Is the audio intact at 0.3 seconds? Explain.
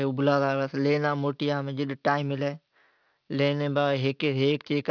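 No. Sibilants sound gritty and metallic throughout, including at 0.3 s. This is aliasing: a sample-rate cut without filtering folds content above 5.5 kHz back onto false pitches.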